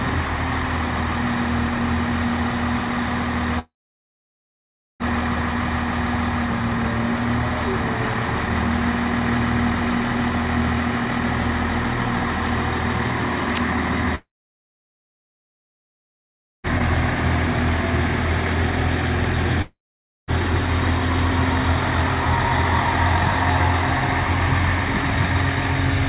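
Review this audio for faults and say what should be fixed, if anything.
Three gaps at 3.59–5.03 s, 14.15–16.67 s and 19.62–20.31 s: a brief fading buzz, then silence for about 1.3 s, 2.4 s and 0.5 s, likely long network dropouts. Across the 4 kHz band of the call path, which fits G.711 mu-law, audio resumes with the missing stretch lost. To prevent this, stabilise the network link and add redundancy or retransmission so stalls don't exhaust the jitter buffer.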